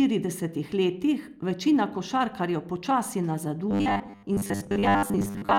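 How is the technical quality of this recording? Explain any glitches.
The recording runs into trouble near the end: from about 3.71 s until the clip finishes at 5.59 s, the speech turns into robotic sound from repeated short buffers. It sounds like a stiff, metallic buzz pitched at 100 Hz that still loosely tracks the words. That pitch points to a 10 ms chunk of audio being looped, likely because new data stopped arriving in time, so roughly two-thirds or more of that stretch is repeats rather than real audio.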